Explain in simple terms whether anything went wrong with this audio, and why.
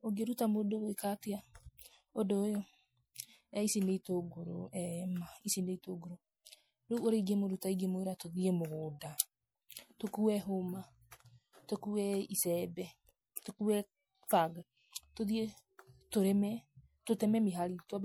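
From start to finish, the speech sounds watery and swirly, and the s sounds turn metallic and chirpy. That is likely MP3 compression squeezed too hard. Short of data, the encoder trims the treble and lets faint detail flicker in and out.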